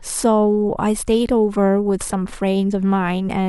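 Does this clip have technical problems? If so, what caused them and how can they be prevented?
No, there are no technical problems in this clip.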